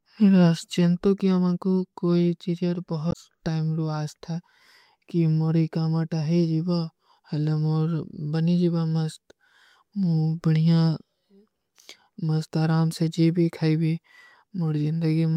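This speech clip has damaged data in its compressed stream between 3.09 and 3.16 s. For roughly 70 ms the bytes arriving at the decoder were corrupted: lost, zeroed or overwritten. The decoder could not make sense of the affected frames, dropped out of sync, and had to hunt for the next valid frame header before decoding normally again. What this does to the sound is a short chirp, squawk, click or hole that cuts across the speech at that point.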